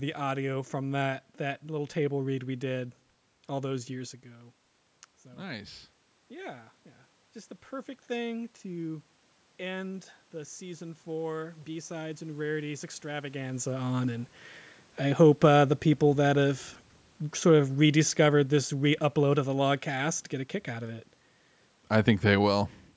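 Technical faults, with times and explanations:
3.72–6.78 s, automatic gain rising: as the talker moves back near 4 s, input falls about 14 dB. The gain control then lifts about 4 dB over three seconds, so voice and room noise swell together. The waveform envelope and spectrogram noise floor climb gradually.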